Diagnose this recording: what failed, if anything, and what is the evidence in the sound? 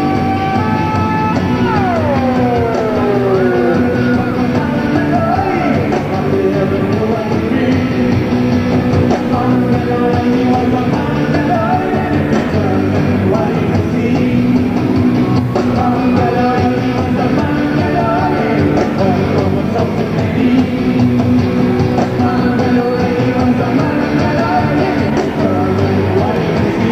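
Nothing stood out on listening that would point to a failure at any stage of the chain.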